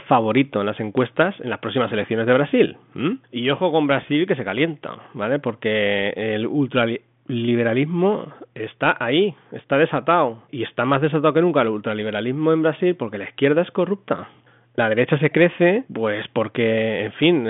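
Nothing stood out on listening to this speech clip.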